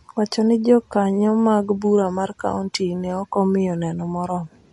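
Throughout the recording, the encoder is starved of bits, most likely from MP3 compression at a low rate, and the damage fits something around 48 kbps. With so few bits, the weaker frequency lines switch on and off from frame to frame. In this speech the result is plainly audible: a watery, swirling colour over the sound, metallic chirps on s sounds, and smeared consonant attacks.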